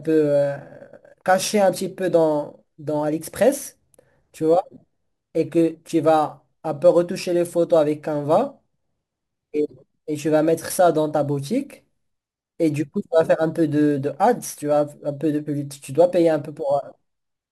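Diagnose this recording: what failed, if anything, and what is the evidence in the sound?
Crude rate conversion at sample-format conversion. Gritty, inharmonic fizz trails loud speech throughout, about 30 dB down. Unfiltered sample repeats fit 44.1 to 48 kHz.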